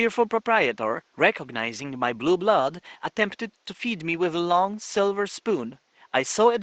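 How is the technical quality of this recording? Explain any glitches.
The recording has no technical glitches, and the only background is the room's own noise, which sits about 43 dB below the speech and belongs to the original space rather than to any fault in the system.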